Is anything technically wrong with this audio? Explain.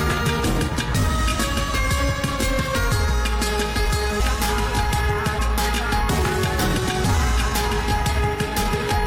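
Yes. There is damaged data in a compressed stream at 1.34, 4.19, 5.38 and 6.77–6.79 s. Corrupted bytes make the decoder misread frames and lose sync, producing brief chirps or blips.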